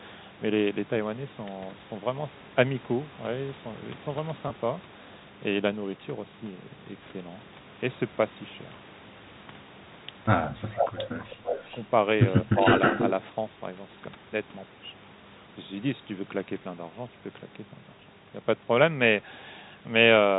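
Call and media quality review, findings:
Packet loss with pitch repetition at 4.48–4.50 s: one lost 20 ms packet bridged by repeating the last pitch period, heard as a brief held, buzzy tone.

Speech suppressed in double talk at 10.5–10.98 s, 11.38–11.61 s and 12.44–12.55 s: echo canceller likely ducking both sides during overlap. The voice dips about 20 dB, then about 15 dB.

Echo leak at 10.77–11.89 s and 12.56–13.12 s: residual loudspeaker echo, likely incomplete cancellation, returned 311 ms and 317 ms late. It is about 5 dB under the talker, then as loud, heard as a delayed copy.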